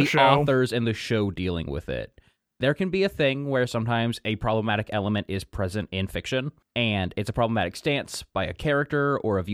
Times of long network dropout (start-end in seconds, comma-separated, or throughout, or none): none